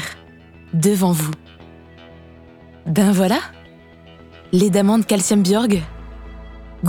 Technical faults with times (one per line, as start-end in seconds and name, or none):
1.20-1.35 loud pop
5.72-5.74 loud pop